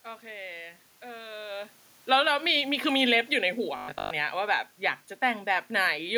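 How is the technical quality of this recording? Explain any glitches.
The recording has three audible glitches, all between 1.96 and 4.11 seconds.

From 1.96 to 2.31 s, automatic gain falls. The gain control judges the input too loud or its background noise too strong, and lowers the level by about 4 dB. The voice and background sink together.

From 2.22 to 2.71 s, automatic gain rises. The control reverses and restores about 4 dB. The speech and room noise swell back up together, just after the talker moves at about 1.5 s.

From 3.77 to 4.11 s, there is robotic sound from repeated short buffers. A rigid, metallic 50 Hz buzz replaces most of the speech. This likely comes from audio arriving too seldom, with the last 20 ms repeated to fill the gaps.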